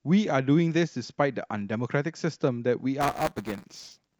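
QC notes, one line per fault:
3.00–4.19 s, buffer tearing: from 3.00 s to the end the speech takes on a robotic buzz at 200 Hz, a rattle that rides on the voice and stops whenever the signal does. The program filling the playback ring buffer and the hardware reading it have slipped so they cross every period. A small slice of each buffer replays audio from roughly ten milliseconds earlier, and the sharp joins repeat at the buffer rate.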